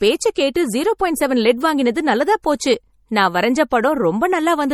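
A speech recording with plainly audible codec damage throughout, likely from MP3 compression at a low rate that fits roughly 48 kbps. Weak frequency lines drop in and out between frames, giving a watery, swirly texture, and nothing is present above 20.1 kHz. Pre-echo precedes sharp attacks at 0.54 s, 2.42 s and 3.69 to 3.71 s. Quantisation noise spread across each transform block leaks ahead of the onset as a short hiss lasting 12, 16 and 20 ms respectively, softening those attacks.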